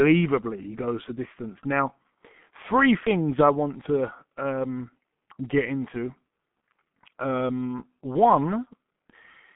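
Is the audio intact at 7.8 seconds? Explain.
No. At 7.8 s, as across the whole clip, the speech shows G.723.1 codec damage. Nothing reaches above 3.8 kHz, and the audible band sits at about 150 Hz to 3.5 kHz, so the speech is muffled. The heavy artefacts point to a very low bitrate near 6 kbit/s, where the codec updates its model of the voice only every 30 ms frame. This coarse tracking leaves the speech hoarse and blurs consonants into their surroundings.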